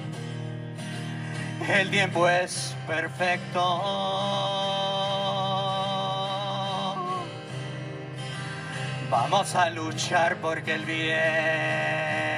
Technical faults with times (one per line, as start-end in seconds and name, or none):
none